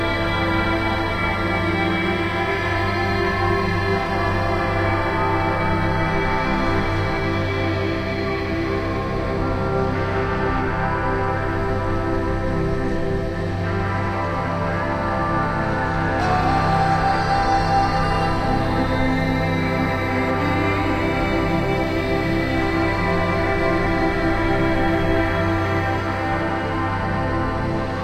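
Everyday sounds, and no technical fault can be heard.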